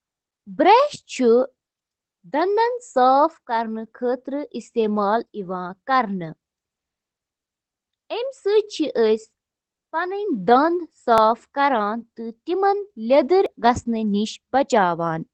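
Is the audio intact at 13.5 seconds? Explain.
No. At 13.46 s there is a sudden jump forward in the speech, most likely a dropped buffer (overrun): roughly 20 ms of samples were overwritten before being read, and the surrounding audio was spliced directly together without any gap.

Across this moment, as throughout, Opus voice compression in SILK mode is plainly audible. The band stops near 8 kHz and the coarse excitation coding makes the speech muffled, hoarse and slightly robotic, which fits a low bitrate of about 12 kbps.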